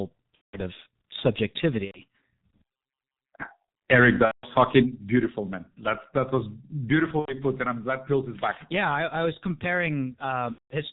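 From start to finish the speech carries the sound of a G.723.1 codec, at a heaviness that fits its 6.3 kbit/s mode. Nothing above 4 kHz comes through, so the voice is muffled. The coarse 30 ms frames and the slowly updated voice model leave it hoarse, with consonants smeared and poorly defined.

Five dropouts show VoIP packet loss concealed by the speech codec, at 0.35 to 0.59 s, 1.85 to 2.00 s, 4.25 to 4.48 s, 7.19 to 7.34 s and 10.52 to 10.74 s. The longer gaps last about 180 ms, which fits six lost 30 ms frames, and the shorter ones about 90 ms, which fits three. In each gap the decoder keeps extending the last pitch and filter while lowering the gain, so the sound stretches into a buzzy tone or coloured noise that fades. Because each frame depends on the previous one, the voice stays weak or distorted for tens of milliseconds or more after each gap ends.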